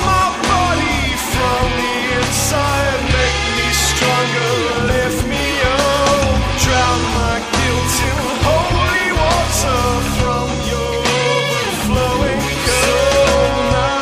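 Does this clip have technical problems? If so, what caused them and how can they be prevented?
No, there are no technical problems to report here.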